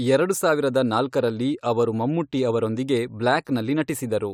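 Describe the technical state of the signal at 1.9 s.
At 1.9 s the speech signal is intact, with no technical fault present at that moment.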